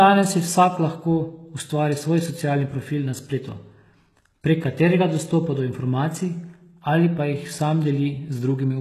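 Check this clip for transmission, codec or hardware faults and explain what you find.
One fault runs through the clip. HE-AAC compression is likely, from start to finish: the treble is rebuilt by copying lower bands upward instead of coding it, so s sounds turn gritty and lispy, and nothing sounds above 12.4 kHz. The plainly audible damage fits roughly 16 kbps.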